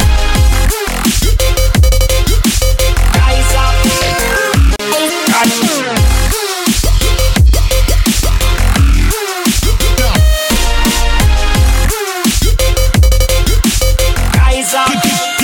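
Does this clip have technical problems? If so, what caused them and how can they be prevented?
Yes: a brief dropout of about 34 ms at 4.76 to 4.79 s, a gap at a join of encoded pieces, where untrimmed encoder delay and padding sit between separately encoded segments. Encode the material in one pass, or trim each piece's encoder delay and padding before joining.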